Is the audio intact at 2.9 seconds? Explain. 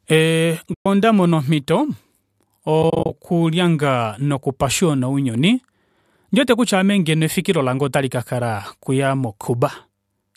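No. Between 2.83 and 3.11 s the stream suffers AAC frame loss with muting: about 130 ms of audio goes missing, scattered over 280 ms in short runs, the longest around 30 ms. That pattern fits roughly 13 short frames, which points to the stream likely being low-delay AAC. The decoder zeroes each lost frame's spectrum, and the overlapping windows fade the sound out and back in, so the speech breaks into a flutter of soft gaps.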